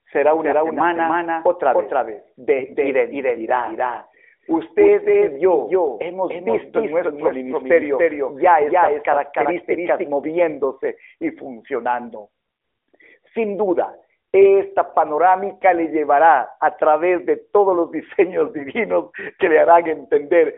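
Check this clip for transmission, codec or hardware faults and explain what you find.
Two kinds of fault turn up in this narrowband speech, whose 300 Hz to 3.5 kHz band and light buzz fit AMR-NB at its 12.2 kbps mode.

From 0.34 to 10.06 s the speech is heard twice, a second equally loud copy trailing about 300 ms behind with no reverb. The likely cause is a doubled audio track, from a slower second capture path or a misaligned edit.

At 2.58 to 2.77 s and again at 18.46 to 18.76 s the voice briefly turns hoarse and gargly. These are AMR bit errors, where a weak link flipped a few percent of the less-protected bits, misplacing excitation pulses and corrupting the gain and spectrum values. The first burst is rougher.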